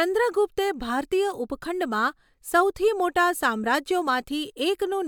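No technical faults are audible.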